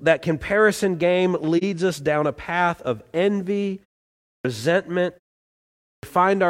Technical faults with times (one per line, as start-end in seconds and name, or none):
4.15-4.45 clipped start after a pause
5.70-6.03 clipped start after a pause